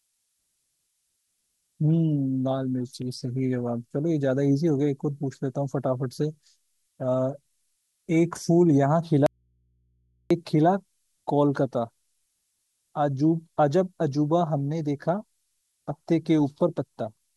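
Throughout the speech a switching supply whistle sits high above it, a thin tone wandering between 12.8 and 13.2 kHz, roughly 40 dB below the speech. On a spectrogram it shows as a narrow, slightly drifting line near 13 kHz across the whole clip.

From 9.26 to 10.31 s there is an audio dropout to a faint residue. The speech cuts off abruptly for about 1.04 s, leaving only mains hum roughly 45 dB down, likely because the signal was lost upstream while the rest of the chain stayed live. The waveform collapses to a near-flat band with sheer edges, and the spectrogram shows a blank block crossed only by low hum lines.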